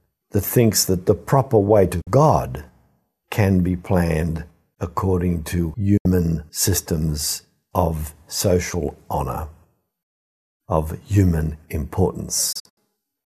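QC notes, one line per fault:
2.01–2.07 s, digital broadcast dropout: the speech cuts to silence for about 48 ms behind a quick 8 ms fade. The receiver muted after losing the signal or failing frame checksums, which fits two lost frames.
5.97–6.06 s, digital broadcast dropout: a similar 72 ms mute, consistent with three lost frames.
12.52–12.78 s, digital broadcast dropout: several short holes totalling 144 ms, the longest 72 ms, as frames repeatedly failed. Audio sent during all three gaps is gone.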